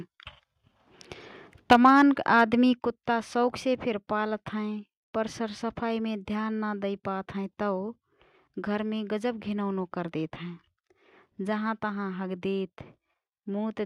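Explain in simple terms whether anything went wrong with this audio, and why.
At 1.71 to 2.02 s, and again briefly at 2.38 to 2.41 s just before "कुत्ता शौखसे फिर", the loudest parts of the speech turn harsh and crackly. This is microphone overload, likely because the microphone was set so high that the peaks hit the recording limit and had their tops sliced off.

The speech and the background also drop suddenly in loudness three times, at 1.73 s, at 2.73 s just before "कुत्ता शौखसे फिर", and at 3.75 s just after "कुत्ता शौखसे". This is the microphone volume stepped down, likely by the call software turning the input down in one step because it found the microphone too loud or clipping.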